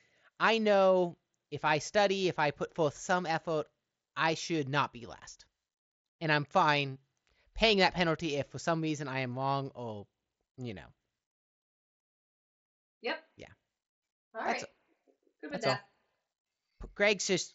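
At 16.71 s, unconcealed Bluetooth headset packet loss: a 7.5 ms stretch of speech over the mSBC link drops out with abrupt edges, leaving a brief gap.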